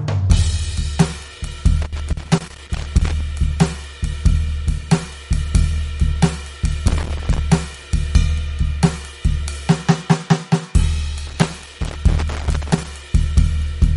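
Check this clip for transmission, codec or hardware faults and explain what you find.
Yes, there's trouble here: the music carries codec damage the whole way through, and there are three bursts of crackle on top.

Throughout, the sound is plainly watery and swirly, with nothing above 11.2 kHz. That's likely MP3 compression at a low rate, around 48 kbps. Short of bits, the encoder drops weak frequency lines that flicker between frames and cuts the treble at a fixed point.

Loose connector crackle shows up from 1.82 to 3.21 s, 6.88 to 7.38 s and 11.27 to 12.87 s. A worn or dirty contact keeps making and breaking as it moves, chopping the signal and popping on any DC, so you hear irregular scratchy bursts.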